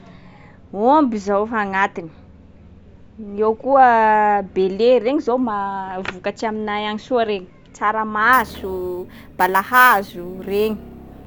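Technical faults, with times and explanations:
8.33 to 11.26 s, imaging from sample-and-hold upsampling: the speech was raised to a higher rate by repeating samples without a smoothing filter, which points to a 16 kHz source. Mirrored spectrum fills about 8 to 16 kHz, about 18 dB down, adding a metallic fizz that tracks the voice.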